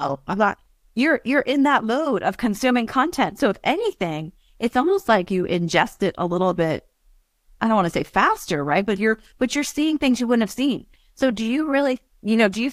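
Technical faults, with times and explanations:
Nothing technical to flag in this speech recording; there's no fault to list here at all.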